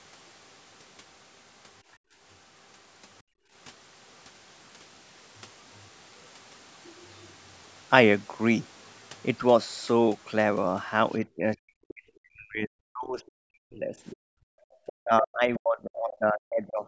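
At 1.97 to 2.17 s and 3.23 to 3.52 s the room background drops away abruptly by about 33 dB and about 30 dB. This is background gated by the echo canceller: it clamped the microphone while the loudspeaker played, then released it.

Brief scraps of the other side's voice leaking through appear at 6.25 to 6.29 s and 7.64 to 7.68 s, faint, roughly 40 dB under the talker. These are likely loudspeaker echo the canceller left in the microphone path.

From 11.25 s to 16.85 s the talker's voice repeatedly sinks and breaks up, with dips of around 40 dB across about 4 s in total. This is speech suppressed in double talk, likely caused by the canceller turning everything down when both sides spoke at once.

Inside that stretch, another fragment of the far voice surfaces at 13.27 to 13.31 s, roughly 35 dB down, likely residual echo. The background gates out again at 14.52 to 14.73 s by about 39 dB. 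From 14.74 to 15.57 s a longer, louder run of the other side's voice comes through, only about 20 dB below the talker, likely echo the canceller failed to remove.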